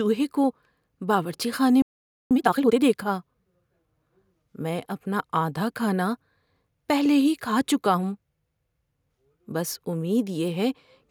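A playback stall runs from 1.82 to 2.31 s. The speech cuts off mid-flow and the output goes completely silent for close to half a second before sound resumes. The cause is likely the player running dry of buffered data, or its audio thread being held up, so nothing reached the output until the buffer refilled. The gap lands abruptly, which makes it read as an interruption rather than a pause in the speech.

Time-compressed catch-up follows immediately, from 2.31 to 2.79 s. Having fallen behind during the silence, the player works off the backlog by dropping small slices of audio and cross-fading across the joins. The result runs at twice normal speed while the pitch stays put, so the speech sounds rushed but not chipmunk-like.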